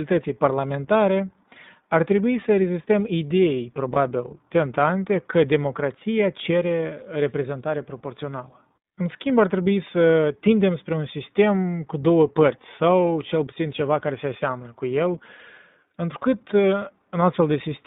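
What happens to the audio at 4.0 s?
Just before 4.0 s, from 3.94 to 3.97 s, there is a lost iLBC frame. The gap lasts about 20 ms, which fits one missing packet. The decoder filled it by repeating the last pitch cycle blended with noise, so the moment sounds like a brief held, slightly buzzy vowel rather than silence. Because each iLBC frame is coded independently, the speech is correct again immediately after the gap.

Around that point, and throughout the clip, the iLBC codec itself is plainly audible. The speech is confined to a telephone band of about 150 Hz to 3.7 kHz, with nothing above it, and it has iLBC's characteristic slightly rough, synthetic texture. That comes from modelling the excitation afresh in each 20 ms frame, and the sound fits the 15.2 kbps mode.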